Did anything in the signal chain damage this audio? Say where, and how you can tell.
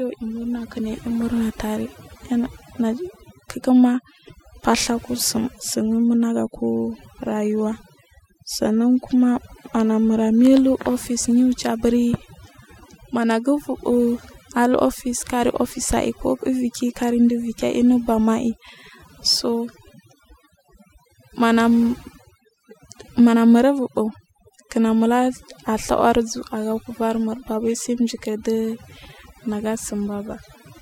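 Yes. Overdone noise removal runs through the whole clip, damage done at the processing stage, where a noise reduction step was set far too strong. In the pauses the background falls to near silence, broken only by twinkling specks, and quieter components of the speech get pulled down along with the noise estimate. A low-bitrate codec would smear the voice too, but it would not empty out the gaps like this.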